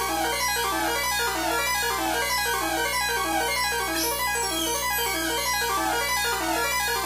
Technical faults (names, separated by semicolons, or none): video or display buzz